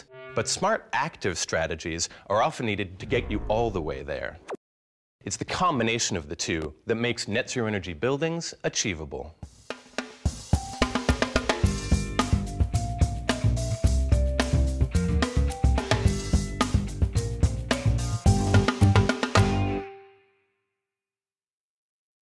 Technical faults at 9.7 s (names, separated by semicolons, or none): none